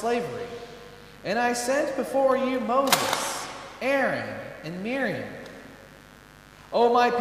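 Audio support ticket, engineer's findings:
Mains buzz, full duration. Switching spikes from a dimmer, rectifier or unshielded run coupling into the signal path twice per 50 Hz cycle. Result: steady raspy buzz, harmonics of 50 Hz up to several kHz, roughly 25 dB below the programme. Probable component: dimmer, rectifier or cable shielding at the source.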